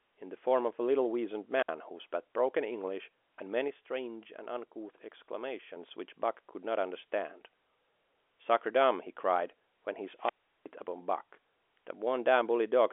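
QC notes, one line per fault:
1.51–1.69 s and 10.16–10.66 s, wireless microphone squelch dropout: the radio link from the analogue FM microphone weakened until the receiver's squelch shut the output. Each event starts with a swell of hiss as the carrier fades, then the speech drops into near silence, for about 60 ms in the first and about 365 ms in the second, before the gate reopens and the voice returns.
3.68–5.76 s, sudden gain jump: for this stretch the speech and the background noise step down together by about 5 dB, with no fade in or out at either edge. The abrupt change at both boundaries points to a digital gain setting likely applied or removed between one sample and the next without a ramp. Because the noise floor moves with the speech, this is a level change and not a quieter talker.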